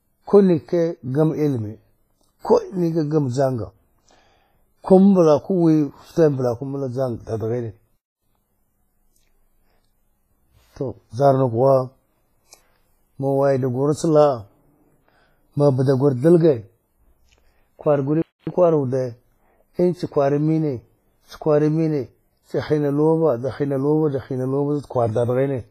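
Speech runs through the whole clip with heavy codec damage: a ringing, washy smear around the sound and nothing above 15.3 kHz. The likely cause is WMA compression, its long transform blocks spreading quantisation noise in time, which fits a low bitrate around 24 kbps. There is also a gap between chunks: 250 ms holes of silence at 7.97 to 8.22 s and 18.22 to 18.47 s, ten seconds apart, where the audio was handled in 10-second pieces and each join left silence without losing sound.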